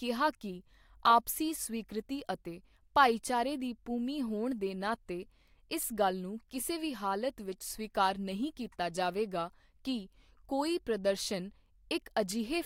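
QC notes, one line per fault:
No faults found in this speech recording. Nothing calls for a timestamp or further attention.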